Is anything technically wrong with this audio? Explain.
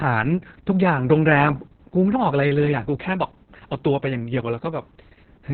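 Yes. The speech carries heavy Opus voice compression throughout. The codec has coded it with its SILK linear-prediction coder in narrowband, so nothing remains above about 4.4 kHz. At a bitrate near 6 kbps the excitation is quantised coarsely, making the voice muffled, hoarse and slightly robotic. A plain low-pass filter would only dull the sound, without adding that rough, buzzy texture.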